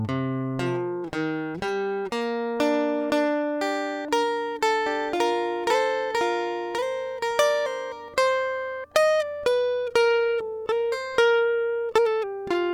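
From 4.86 s to 8.08 s the music picks up a doubled audio track: a second, full-band copy running around a second behind the original and at roughly the same level. There's no decay or room tone on the echo, and it cuts in and out abruptly at those edges. Likely cause is the signal being captured twice, once through a slower path.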